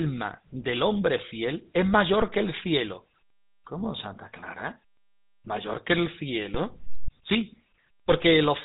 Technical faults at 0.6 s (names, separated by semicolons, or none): GSM full-rate codec